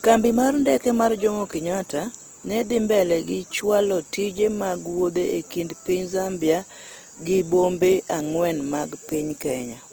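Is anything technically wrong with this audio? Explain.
Yes. Throughout, the speech sounds rough, grainy and noisy, with plainly audible damage. This is likely Opus compression in CELT mode, which fills starved bands with noise at a rate that fits about 16 kbps.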